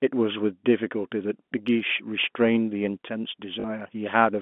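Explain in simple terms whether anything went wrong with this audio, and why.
A brief robotic stutter at 3.6 s, about 40 ms long: packet loss with last packet repeated, where missing audio was filled by replaying the previous chunk.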